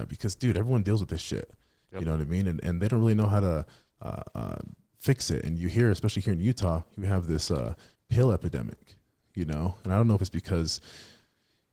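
Opus voice compression runs throughout the speech. The lower band is coded by linear prediction with a transform layer above 8 kHz, and content reaches 20.1 kHz. The excitation is coded coarsely enough to be plainly audible, which fits about 16 kbps in 20 ms frames.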